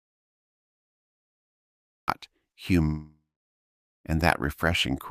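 From the start until 2.08 s, an audio dropout to silence leaves a flat waveform and an empty spectrogram, with no room tone. The likely cause is a lost input or mute. From 2.85 to 4.07 s, a long network dropout, likely lost packets, stretches the last sound into a fading buzz, then leaves about 0.84 s of blank spectrogram.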